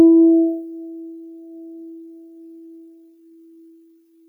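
A music clip. A noise suppressor for speech is applied throughout. Held tones and tails sink by around 15 dB while attacks pass, so the sound pumps and thins. From 0.86 s to the end, the pace abruptly slows to 0.66 times speed while the pitch holds. The audio drags, likely from a time-stretched section.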